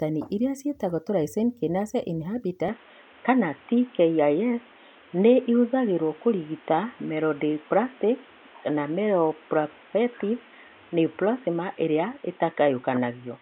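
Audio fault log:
2.68 s to the end, input switched to a poorer device: the speech abruptly loses everything above 3.8 kHz and turns boxy, with no gap and no level jump. It is likely a device change rather than filtering, because a new background noise, roughly 30 dB down, arrives with it.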